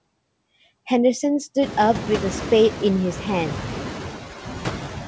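All the way through you can hear noise suppressor artifacts: the suppressor pulls its estimate of steady background down by about 8 dB, so the noise dips between phrases and swells back under speech, worst once the room noise jumps up around 1.5 s.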